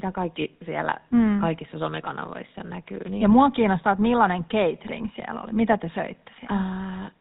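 From start to finish the speech carries GSM full-rate codec damage, plainly audible: a buzzy, gravelly roughness from pulse-driven vocal-tract modelling, with nothing above 4 kHz, which fits a 13 kbps phone link. Plain band-limiting would sound muffled but smooth, without this grainy buzz.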